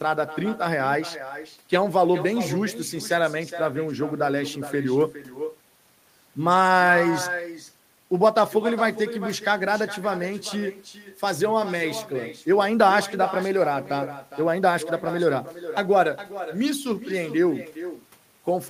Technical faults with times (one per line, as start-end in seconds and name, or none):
0.00-18.70 echo with no canceller